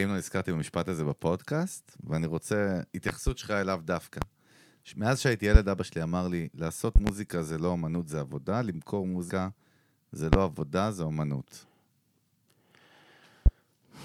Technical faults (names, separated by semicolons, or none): loud pop; CD skip